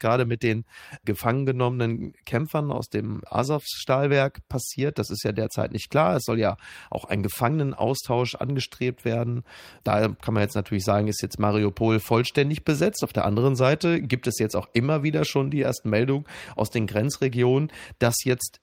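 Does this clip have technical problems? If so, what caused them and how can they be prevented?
No, I hear no technical faults.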